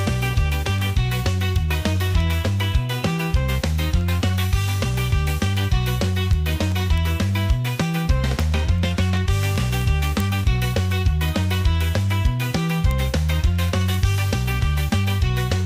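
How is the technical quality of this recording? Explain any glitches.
The recording is spoiled by a steady stream of ticks from start to finish. Word clock ticks, 0.14 to 15.62 s: an unlocked receiver clock slips one sample about every 0.15 s, giving uneven ticks whose steady rhythm sets them apart from random crackle.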